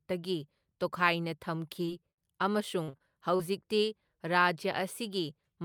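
Speech with three packet-loss faults in close succession. At 1.85 to 1.89 s there is a short concealed packet loss: about 20 ms of audio never arrived in time, and the receiver bridged it by extending the preceding sound, heard as a brief smear. From 2.11 to 2.19 s comes a burst of packet loss, with roughly 60 ms missing. The decoder sustained the last sound and faded it, giving a held sound that decays before speech resumes further along. The waveform shows a smooth, shrinking envelope, and the spectrogram shows a frozen spectrum dimming toward the join. Between 2.83 and 3.41 s, repeated packet loss (robotic sound) sets in: four separate gaps, the longest 44 ms, patched with about 140 ms of synthesized fill, roughly a quarter of that stretch. The result is choppy, with pieces missing, and the spectrogram shows repeated frozen patches interrupting the natural speech.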